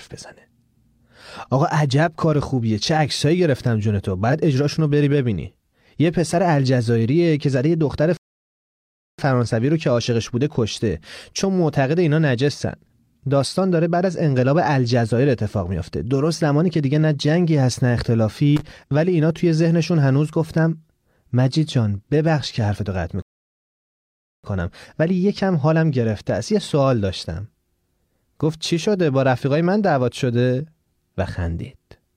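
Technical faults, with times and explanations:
8.17 to 9.19 s and 23.22 to 24.44 s, rebuffering stall: the speech drops to silence for about 1.0 s, then 1.2 s, and resumes exactly where it stopped, so nothing is missing, unlike a dropout.
18.56 to 18.71 s, loose connector crackle: a brief irregular burst of scratchy crackle as a faulty contact rapidly breaks and remakes the signal, rougher and more erratic than a single click.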